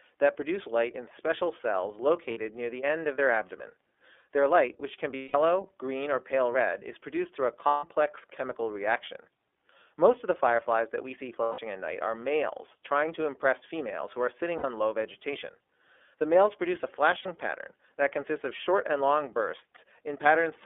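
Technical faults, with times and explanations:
Throughout: iLBC codec. The speech is confined to roughly 300 Hz to 3.5 kHz and sounds slightly rough and synthetic. Because each frame's excitation is coded independently, it never drifts or smears like predictive codecs, which fits iLBC's 13.33 kbps mode with 30 ms frames.
2.30–2.38, 5.16–5.35, 7.68–7.84, 11.42–11.59, 14.58–14.65 and 17.22–17.26 s: lost iLBC frames. Each gap, 30 to 180 ms long, is filled by a repeated pitch cycle mixed with noise, heard as a held, buzzy or breathy vowel. Unlike dropouts with silence, the voice recovers cleanly immediately afterwards.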